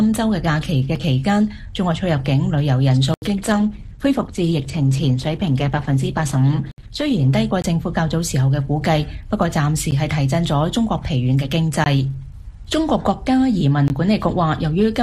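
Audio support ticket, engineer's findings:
Dropouts: hard cuts to digital silence with no fade. Tick at 0.96 s. Audible holes at 3.14–3.22 s (80 ms) and 6.71–6.78 s (66 ms). Short pops at 7.62–7.64 s, 9.91 s, 11.84–11.86 s, 13.88–13.90 s. Cause: block of digital silence. Likely output buffer not filled in time, so zeros were written instead of samples, with no fade in or out.

Quality step: sudden dull stretch at 3.34–7.34 s, with nothing above 12.3 kHz and more codec artefacts. No gap at either transition. Cause: adaptive stream at a lower bitrate. The connection slowed and the player switched to a cheaper rendition, which points to a drop from around 64 to 16 kbit/s Opus, then switched back once throughput recovered.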